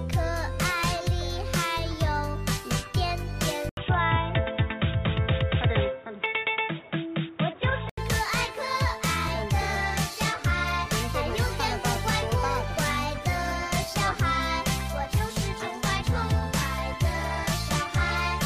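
At 3.69 s an 80 ms gap opens and the sound turns dull and boxy, with nothing above 3.8 kHz and a new noise floor well below the signal, at much the same level, until 7.97 s. This is likely an input switched to a poorer device.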